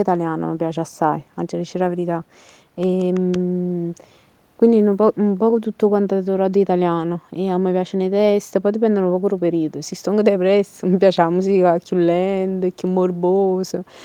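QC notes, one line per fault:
No technical faults are audible anywhere in the speech recording; the signal holds steady in level and continuity throughout.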